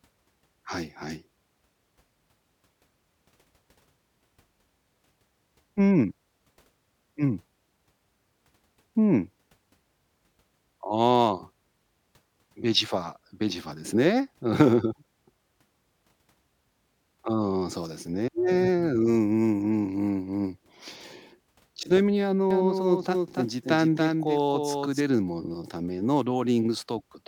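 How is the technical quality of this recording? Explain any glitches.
One glitch stands out in the speech. A doubled audio track runs from 22.51 to 25.01 s, where a second full-band copy of the speech trails the original by around 300 ms at roughly 5 dB lower. The likely cause is the signal being captured again through a slower path, or an edit leaving two out-of-step copies. It sounds like a dry, flat echo with no room tail, and it switches on and off abruptly at those boundaries.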